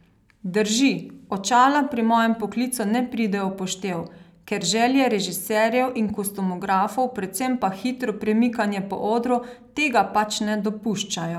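No technical faults can be heard anywhere in the recording.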